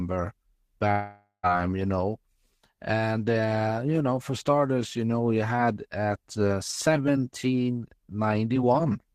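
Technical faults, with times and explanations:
0.91 to 1.46 s, long network dropout: The speech breaks off and the last sound drags on as a buzz that fades, then about 0.1 s of silence follows. Speech resumes with roughly half a second lost, likely from packets that never arrived.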